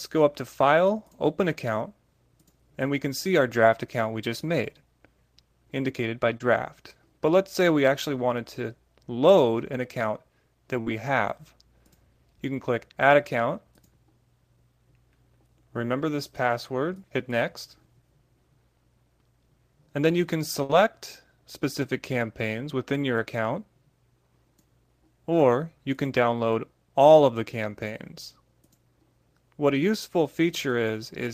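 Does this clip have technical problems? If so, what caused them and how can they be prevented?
Yes. At 6.37 to 6.41 s there is a brief smear, a wobble where the sound should move on crisply. This is short concealed packet loss: about 30 ms of audio never reached the decoder in time, and the receiver covered roughly 25 ms of the gap by extending the preceding sound before blending back into the real signal. A larger jitter buffer or forward error correction would prevent it.

At 10.81 to 10.87 s and again at 20.63 to 20.70 s, the sound hangs for a moment as a held, fading tone or hiss, then jumps ahead with a little missing. Each is a burst of packet loss, with about 50 and 60 ms lost. The receiver continued the last sound for about 54 and 59 ms while turning it down, then resumed further on. More network headroom, redundant packets or a wired connection would prevent it.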